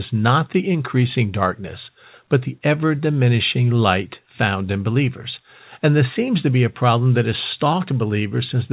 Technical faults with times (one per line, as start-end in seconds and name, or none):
none